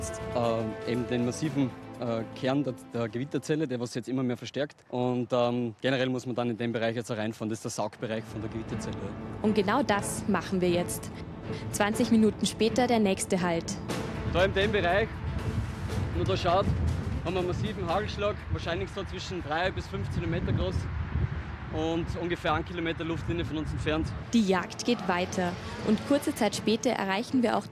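Nothing technically wrong turns up anywhere in the sound, so there's no problem here to time or trace to a cause.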